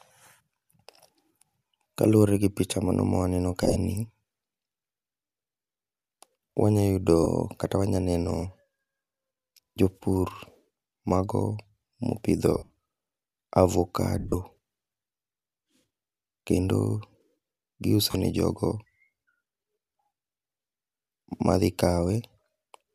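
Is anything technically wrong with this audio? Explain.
Yes. Bluetooth LE Audio frames were lost at 3.63–3.76, 7.23–7.26, 12.55–12.70, 14.19–14.34 and 18.11–18.14 s. For each gap, the decoder repeated the last spectrum with scrambled phase, turning the speech into a brief noisy smear. The longest gap, a run of roughly 70 ms near 12.6 s, fades toward silence. The slight grain in the speech is likely from the LC3 coding of the link.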